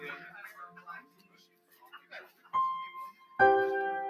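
A noise suppressor applied to music or sounds runs through the whole clip. Tuned for speech, it treats sustained tones and decaying tails as noise and pulls them down, so level swings by roughly 15 dB, giving a pumping, fluttering, thinned-out texture while sharp onsets survive.

Sound cut by the noise suppressor appears from 1.01 to 2.52 s, where the suppressor mistakes this sound for noise and attenuates it harder than its surroundings, by about 13 dB at the deepest point. The sound sinks.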